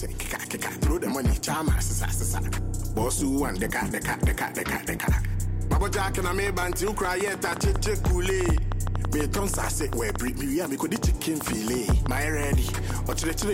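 From 6.01 s to 13.43 s a train of clicks runs over the sound: about fifty similar pops, around 7.6 per second at uneven spacing, peaking roughly 10 dB above the signal. They are likely interference or a faulty connection, and show as thin vertical broadband lines on a spectrogram and as sharp spikes on the waveform.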